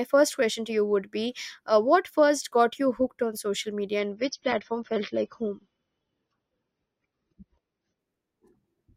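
An adaptive stream at a lower bitrate runs from 3.99 s to 7.99 s of this speech clip, starting just after "hooked on social media". The treble abruptly disappears above about 6.3 kHz and codec artefacts thicken, with no gap in the audio. This is what happens when a player falls back to a leaner version of the stream because the connection slowed. The sound points to roughly a drop from 96 kbit/s to 24 kbit/s AAC.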